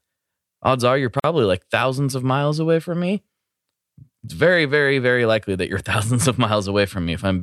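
Right after "odds are you're", at about 1.20 s, the speech just drops out for roughly 44 ms, until about 1.24 s, then picks up with "like thousands of miles" exactly where it left off. That's a gap at a join of encoded pieces: two separately encoded chunks got stitched together without trimming, so one's end padding and the next one's start-up silence both stayed in. You hear a brief hole, its edges smeared by the codec.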